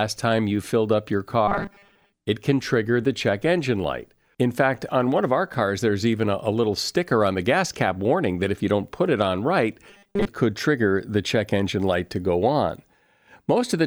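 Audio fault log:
1.48–2.14 s and 9.89–10.29 s: robotic sound from repeated short buffers. The first comes after "you filled up your" and the second after "put it on right". Each time, the sound hardens into a rigid, metallic buzz at 200 Hz that still roughly tracks the speech. A 200 Hz buzz points to the same 5 ms stretch being replayed again and again. This likely happened because new audio arrived too late and most of the real signal was skipped.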